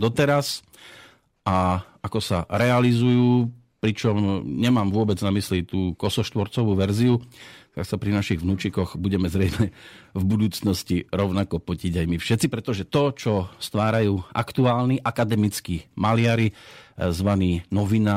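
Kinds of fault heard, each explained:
Drift correction step: from 13.62 to 15.36 s the speech plays 5.5% fast and sits 93 cents sharp, nearly a semitone, then snaps back. This is likely clock-matching software changing the playback rate in one jump to rebalance its buffer.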